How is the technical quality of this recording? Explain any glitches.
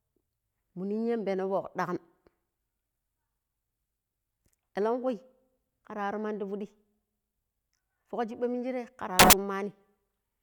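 There is one glitch. From 9.19 to 9.33 s, samples are built from the wrong bytes: the decoder assembles each sample misaligned, so the low bits dominate, producing a burst of loud, harsh broadband noise.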